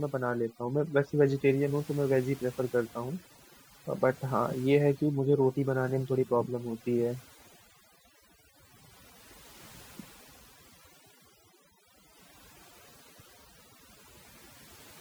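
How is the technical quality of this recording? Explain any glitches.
The recording is marred by one fault that runs from start to finish: overdone noise removal. In the pauses the background drops and breaks up into twinkling specks. A noise reduction stage was pushed too hard, so any frequency band sitting close to its noise estimate gets pulled far down or cut out. The quieter parts of the speech fall into that range and are stripped away with the noise.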